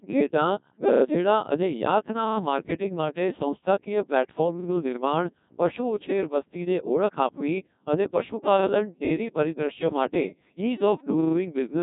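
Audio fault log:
throughout: Codec 2 vocoder. The speech is rebuilt from sine waves driven only by pitch, voicing and a spectral envelope, so it sounds robotic and buzzy with nothing above 3.8 kHz. The heavy damage fits roughly 1.6 kbit/s. Unlike ordinary low-bitrate smearing, the waveform itself is resynthesised.
4.60–4.68 s: repeated buffer. One short piece plays three times, with a hard join at each repeat, giving a brief stutter that fits a 40 ms buffer replayed while new audio was late. Unlike a dropout, there is no silent gap and little or nothing is missing.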